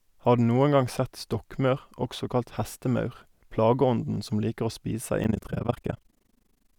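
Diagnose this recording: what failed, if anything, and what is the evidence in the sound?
Overlap-add ripple in the frame-based processing stage, from 5.24 s to the end: the speech flutters roughly 30 times a second, with level dips of about 60 dB. Frames are resynthesised with an overlap whose gains don't sum evenly. Unlike packet-loss dropouts, the dips are strictly periodic.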